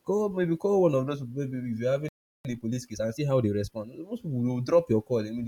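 A playback stall hits this speech clip at 2.09 s, just after "people maybe if you're": the sound cuts out mid-flow and stays silent for about 0.36 s, resuming at 2.45 s. A gap like this, with the output simply going quiet rather than glitching, is likely the player running dry of buffered data or its audio thread being held up, so nothing reached the output until it recovered. Time-compressed catch-up follows straight away, from 2.45 s to 3.89 s. The player works off the backlog the stall left behind by cutting out short slices and cross-fading the remainder together, so the talker sounds hurried at 1.25 times normal speed while the pitch stays where it was.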